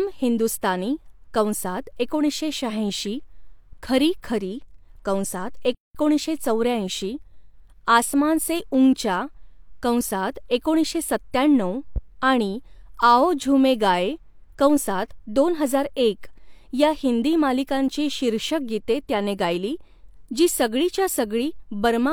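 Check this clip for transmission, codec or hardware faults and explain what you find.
The speech clip has two faults: a playback stall and a loud pop.

From 5.75 to 5.95 s the audio drops out for about 0.2 s, then resumes. This playback stall likely comes from the player running short of data or its thread being blocked.

At 11.96 to 12.00 s, just after "कंसात एकोणीसशे सत्त्याण्णऊ", a single loud pop peaks around 5 dB above the speech, which continues underneath. The likely cause is a sudden voltage step or pulse.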